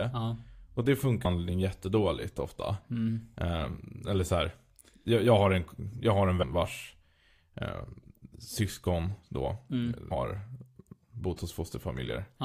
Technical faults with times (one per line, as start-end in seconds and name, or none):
1.24 compressed frames skipped
6.41 compressed frames skipped
10.10 compressed frames skipped